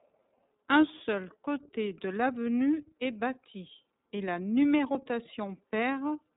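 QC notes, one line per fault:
Throughout: iLBC codec. The speech is band-limited with nothing above 3.8 kHz, so sibilants and consonant detail lose their brightness. The codec damage is plainly audible as a slightly rough, synthetic texture. The excitation is coded independently for each frame with no carry-over from the previous one, which fits 30 ms frames at around 13.33 kbps.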